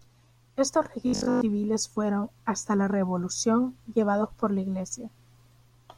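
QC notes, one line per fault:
1.07–1.41 s, robotic sound from repeated short buffers: new audio likely stopped arriving in time, so playback kept looping the last 20 ms chunk while the real material was skipped. For most of this stretch the repeats impose a fixed 50 Hz pitch, one over that 20 ms length, turning the speech into a rigid metallic buzz that only loosely tracks the syllables, before clean audio returns with "fueron hasta la".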